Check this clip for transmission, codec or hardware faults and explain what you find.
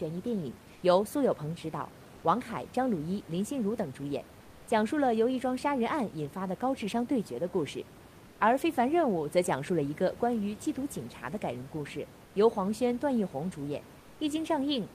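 One kind of transmission fault appears: comfort noise in place of the background, in five short pauses between speech, at 0.73–0.81 s, 2.15–2.23 s, 8.25–8.39 s, 12.25–12.33 s and 13.99–14.19 s. The sender likely stopped transmitting during these silences (discontinuous transmission, as in Opus DTX), and the receiver filled each gap with synthetic noise roughly matching the background. The room's ambience, which sits about 23 dB below the speech, loses its detail there and becomes a flat, featureless hiss. In most gaps it is also a little quieter, by about 2 to 4 dB, though at 2.15 s the level holds steady. On a spectrogram each gap shows as a smooth, uniform band without the irregular texture of the surrounding background. On a waveform it appears as a slightly lower, evenly filled noise floor.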